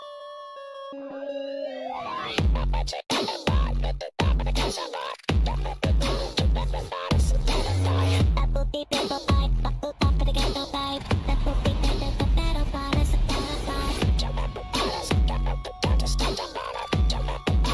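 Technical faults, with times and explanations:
No technical faults detected anywhere in the clip.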